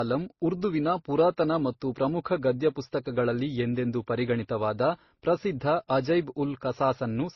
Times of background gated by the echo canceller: none

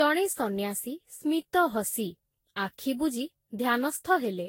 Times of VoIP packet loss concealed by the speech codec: none

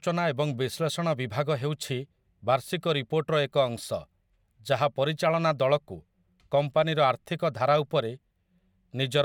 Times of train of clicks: none

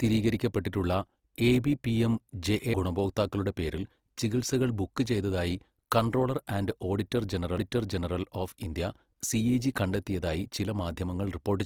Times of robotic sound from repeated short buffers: none

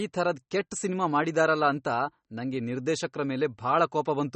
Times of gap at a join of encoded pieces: none

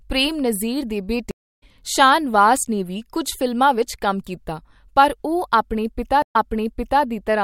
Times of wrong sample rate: none

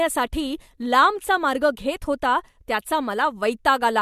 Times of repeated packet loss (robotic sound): none

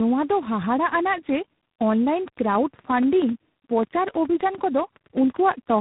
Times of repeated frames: none

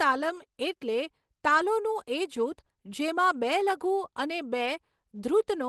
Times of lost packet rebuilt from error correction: 1.45-1.63, 4.65

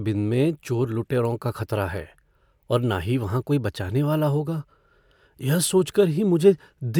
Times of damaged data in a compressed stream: none

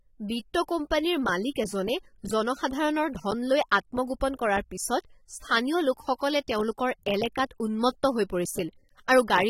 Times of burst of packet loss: none

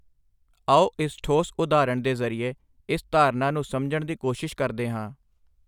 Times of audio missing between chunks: none

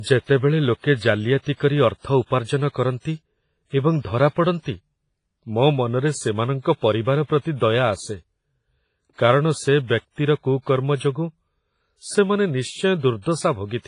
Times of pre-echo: 2.44-2.48

